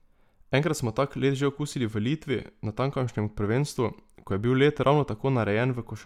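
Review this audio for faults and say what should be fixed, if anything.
No faults turn up in this audio, so nothing needs to be fixed.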